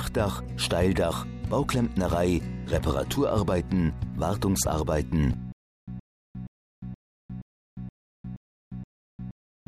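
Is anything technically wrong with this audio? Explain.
Yes. From 5.52 s to the end there's a stutter with silent gaps: a 119 ms burst repeats eight times, each followed by about 354 ms of dead digital silence, so it pulses every 473 ms. That's likely a stalled stream replaying its last fragment on each retry, and the audio meant for that stretch is gone.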